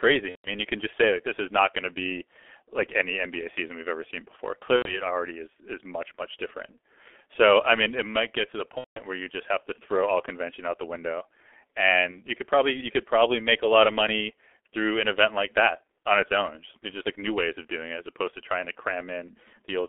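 The whole recording passed through a G.723.1 codec at a very low rate, consistent with about 6.3 kbit/s. Its 30 ms frames and slowly updated voice model, with the line band held to roughly 300 Hz to 3.4 kHz, leave the speech heavily muffled and hoarse, with consonants smeared together.

VoIP packet loss concealed by the speech codec then occurs four times. When packets went missing, the decoder kept extending its last pitch and filter settings while turning the level down frame by frame, so each gap becomes a fading smear of buzz or coloured noise that stays weak for a while after real audio resumes. From 0.29 to 0.50 s, just before "you can just say", about five frames are lost, around 150 ms, and the sound mutes from the third lost frame. From 4.76 to 5.02 s, roughly 90 ms is bridged. From 8.78 to 9.01 s, between "might get to the" and "where you just have", the longest stretch, about 180 ms, fades and then mutes. 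At 12.11 to 12.20 s, ahead of "you could probably you", a single 30 ms frame leaves a brief blur.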